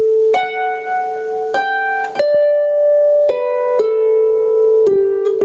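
Gain pumping runs through the whole clip, with a swing of roughly 20 dB. The likely cause is input gain set far too high, with a fast limiter clamping each peak. On the waveform the envelope looks flattened, and on a spectrogram everything sits below the 8 kHz ceiling left by the call's microphone processing.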